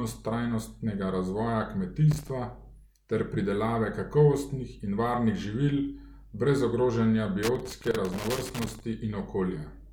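A worn or dirty contact somewhere in the signal path is making and breaking as it shifts. That produces loose connector crackle in this speech. Each break chops the signal. Just after "trajnostnega razvoja" there is a short burst of irregular scratching from 2.11 to 2.30 s. After "brez ogrožanja" a longer spell of crackle runs from 7.43 to 8.80 s, roughly 1.4 s of uneven crackle.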